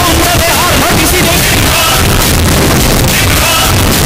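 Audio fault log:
Throughout: signed and unsigned mixed up. Every passage is blasted into dense, harsh distortion at near full level, quiet moments included, because each zero crossing lurches across the whole range; likely the 16-bit samples are being read with their top bit flipped.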